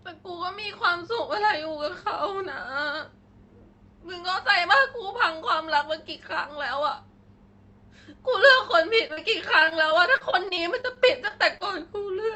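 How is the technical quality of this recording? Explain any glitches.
The speech has one clear glitch, near the end. From 9.07 to 11.62 s there is repeated packet loss (robotic sound): sixteen short holes, the longest 40 ms, covering about 12% of that stretch. Each hole is patched by extending the previous sound, so the speech turns choppy with pieces missing rather than falling silent, which separates it from plain dropouts. The audio also carries coding noise from a call codec, which points to Opus at 32 kbps with content stopping at 8 kHz.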